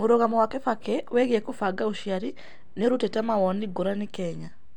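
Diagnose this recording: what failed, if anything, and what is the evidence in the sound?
Driver or buffer stage: processor overload crackle at 2.36–2.53 s, after "wĩgĩe kũbanga ũcĩarĩ" and before "niũrũtĩte mawonĩ". Several very short buffers overran, leaving skipped, hard-edged gaps.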